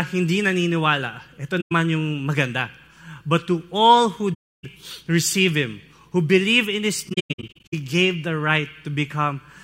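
AAC frame loss with muting occurs three times in this speech: the decoder lost frames and zeroed their spectrum, so overlapping windows fade the sound out and back in as soft-edged silent holes. After "hindi naniniwala ito", about 107 ms drops out from 1.60 to 1.72 s before "yung maganda". After "to all who", 4.33 to 4.64 s goes silent for about 0.3 s. From 7.09 to 7.74 s, before "gave the", gaps scattered through the span total about 0.43 s, the longest run about a tenth of a second.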